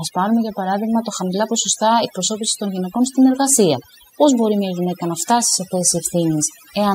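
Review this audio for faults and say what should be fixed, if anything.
Overdone noise removal runs through the whole recording. A noise reduction stage was set far too aggressively for the amount of background noise present, so it cuts individual frequency bands down hard whenever their level sits close to its noise estimate, taking the softer parts of the speech along with the noise. The background drops but breaks up into twinkling, warbling artefacts. To prevent it, capture cleaner audio at the source and apply gentler reduction, checking by ear for swirling residue.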